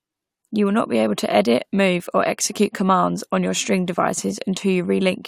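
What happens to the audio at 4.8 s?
Nothing goes wrong at 4.8 s; the speech carries on intact through that moment, with no dropout, click or other fault to be heard.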